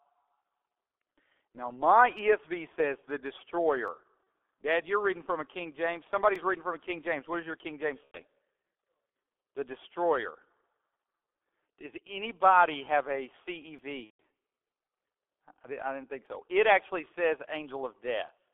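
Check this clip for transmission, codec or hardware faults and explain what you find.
Yes, three kinds of fault are present.

G.723.1 codec, throughout: this low-rate coder at 6.3 kbit/s, band-limited to roughly 250 Hz–3.5 kHz, heavily muffles the speech, adding hoarseness and blurred consonants.

Audio missing between chunks, at 3.88, 6.36 (before "reading from a"), 13.79 (after "anybody have a") and 16.26 s: skips of about 20 ms, spaced near 2.5 s, likely chunk-boundary losses spliced without silence.

VoIP packet loss concealed by the speech codec, at 4.25 s (30 ms), 8.05–8.21 s (90 ms) and 14.04–14.21 s (150 ms): the decoder extrapolates a fading buzzy fill, muting the longer losses. These fit one, three and five lost 30 ms frames.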